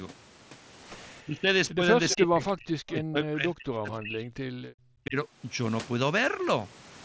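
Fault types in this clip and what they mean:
speech suppressed in double talk: the voice repeatedly dips or drops out, by up to about 40 dB, likely an echo canceller turning down the talker during double talk.
echo leak: brief, faint copies of the voice arrive 325 ms late, about 10 to 25 dB down, likely loudspeaker echo that the canceller failed to remove.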